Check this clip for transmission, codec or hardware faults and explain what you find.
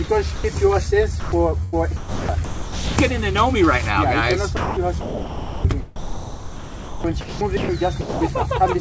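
Several short gaps and three choppy stretches interrupt the sound. Each points to the sender's voice detector muting real audio and comfort noise filling in.

Sound dropped by the voice detector, at 0.04–0.08 s, 0.36–0.44 s, 1.20–1.32 s and 8.01–8.21 s: the sound briefly gives way to flat, steady hiss, lasting from 40 ms up to 200 ms. The likely cause is the detector misjudging quiet material as background and pausing transmission while the receiver generated comfort noise.

Sound chopped by the voice detector, at 1.64–2.97 s, 4.57–5.65 s and 5.96–7.69 s: the sound stutters on and off. Roughly 0.93 s, 0.84 s and 1.4 s of audio are replaced, likely because the detector toggled repeatedly between sending and muting.

The audio passed through a call path with nothing above 8 kHz, which fits G.722 at 64 kbps.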